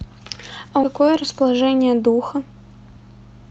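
A speech clip carried over a call path whose coding caps the spectrum near 8 kHz, consistent with Opus at about 32 kbps. At 0.83–0.85 s there is a skip ahead: roughly 0.4 s of audio is dropped with no fill. The waveform splices directly from the audio before the jump into later material, and the spectrogram shows an abrupt vertical seam where formant tracks break without any silent gap. From 0.93 to 1.76 s a jitter buffer speed-up follows as the receiver trims its excess delay. It cuts short pitch-period pieces repeatedly, removing around a tenth of a second, so the speech plays at about 110% speed with unchanged pitch and sounds hurried. The spectrogram shows harmonics at normal spacing but compressed syllable durations.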